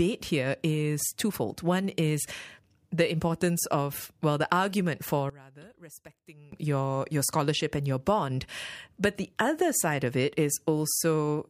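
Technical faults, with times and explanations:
5.30–6.52 s, one channel inverted: one side of the stereo pair has likely had its polarity reversed, so when the two channels are combined, the speech they share cancels instead of adding up. Right after "well the argument for", the level falls by about 22 dB and the speech turns faint. Only the small difference between the channels survives until full level returns at "your your scholarship and".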